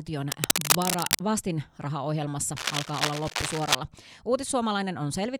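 Dense rustling bursts scratch over the speech from 0.32 to 1.21 s, slightly louder than it, and again from 2.57 to 3.75 s at similar loudness: cable scratch noise, likely from a worn, moving contact.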